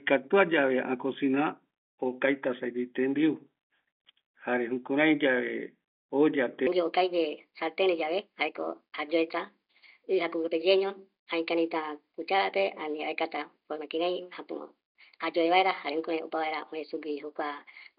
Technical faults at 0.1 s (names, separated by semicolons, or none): none